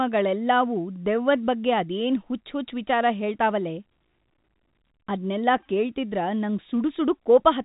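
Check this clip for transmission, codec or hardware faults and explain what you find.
No transmission, codec or hardware faults.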